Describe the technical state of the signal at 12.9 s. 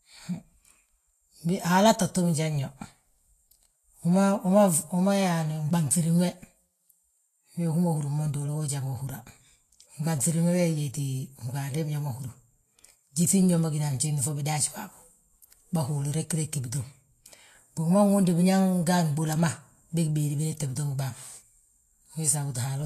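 Vorbis compression at 12.9 s, as throughout the clip, is the likely cause: coarsely quantised treble turns grainy and hissy, with nothing above 14.2 kHz, which fits a bitrate around 34 kbps.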